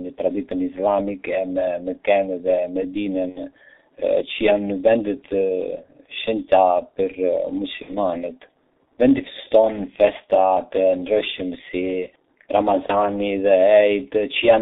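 Speech through a heavily damaging G.723.1 codec: besides the narrow 250 Hz to 3.7 kHz band, it sounds hoarse with smeared consonants, which plain filtering wouldn't cause, and fits a rate near 6 kbit/s. VoIP packet loss concealed by the speech codec occurs at 3.30–3.41 s, 7.82–7.96 s and 12.86–13.07 s. These are fading stretches of buzz or coloured noise rather than silent dropouts, with weakness lingering afterwards, consistent with one or two lost 30 ms frames.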